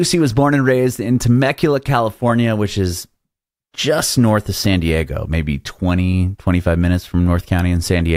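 Nothing in this speech recording points to a technical fault, and the signal stays continuous and stable throughout.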